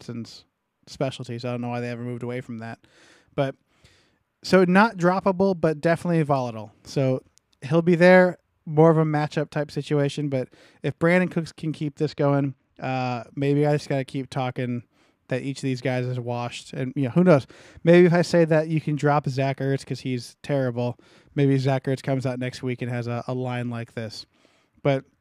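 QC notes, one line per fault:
12.05–13.27 s, channel delay (comb filtering): between "can keep" and "maybe I just got" the speech turns dull and thin at the top, with the sibilants and air softened. One channel runs behind the other by only a couple of samples, a few hundredths of a millisecond. When the two are folded to mono, shared content cancels at evenly spaced frequencies, with the first deep notch landing around 10 kHz.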